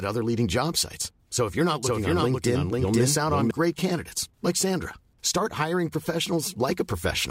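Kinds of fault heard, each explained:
Doubled audio track, 1.83 to 3.51 s: after "if you're not", a second full-band copy runs about half a second behind at roughly equal loudness, with no decay, starting and stopping abruptly before "great candidates like". Its likely cause is a slower second capture path mixed in.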